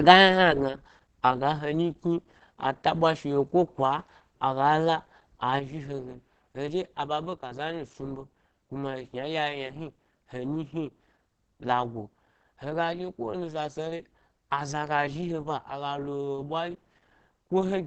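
From the start the speech sounds muffled and hoarse, with plainly audible codec damage and nothing above 8.5 kHz, which fits Opus compression likely running in its SILK speech mode at around 16 kbps. At 5.59 s the level drops abruptly by about 6 dB and stays down to the end, likely because one channel drops out before the mix to mono.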